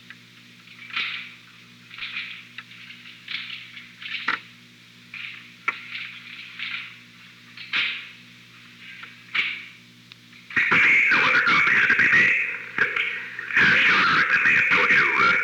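No technical faults can be heard anywhere in this recording.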